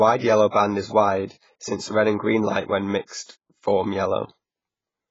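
A transform codec, likely AAC compression at a very low bitrate consistent with about 16 kbps, removes everything above 7.7 kHz, leaving the speech dull, smeared and warbling throughout. Because its quantisation noise spreads across whole blocks, it leaks ahead of sharp attacks as pre-echo: brief hiss and softened onsets at 0.49–0.54 s, 1.26–1.30 s, 3.07–3.10 s and 3.24–3.29 s.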